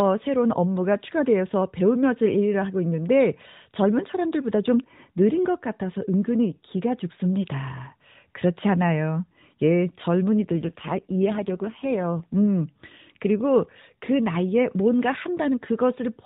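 From 10.39 to 12.34 s there is an AMR rate drop. The speech, already narrowband through the AMR-NB mobile codec with nothing above 4 kHz, turns rougher, buzzier and more synthetic, which fits the link stepping down from about 12.2 to 5.9 kbps to free bits for error protection. On a spectrogram the 4 kHz ceiling holds and the waveform shows no gap, but harmonic detail blurs until the rate recovers.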